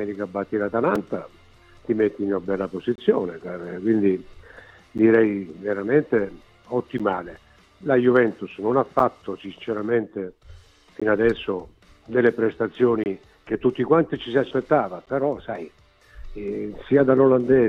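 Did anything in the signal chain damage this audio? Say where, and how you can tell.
Yes, there are gaps between stream segments at 0.95, 2.96–2.98, 4.98, 6.98, 8.99, 11.00, 13.04–13.06 and 15.06 s, from streaming playback. Hard-edged silences of 4 to 26 ms recur every 2 s, matching segment boundaries whose timestamps don't abut, so the player pads each hole with silence.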